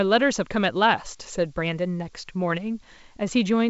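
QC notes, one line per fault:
Nothing to flag here, since the speech comes over the call path as you'd expect, with the G.722 coding leaving nothing above 8 kHz, and no faults turn up anywhere in it.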